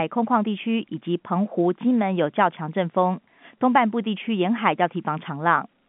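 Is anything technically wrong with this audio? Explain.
No, nothing is technically wrong with this speech recording. It carries the narrow band of a G.711 telephone line, with content confined to roughly 150 Hz to 3.5 kHz and nothing above it, which points to standard 64 kbps A-law telephone coding working as intended.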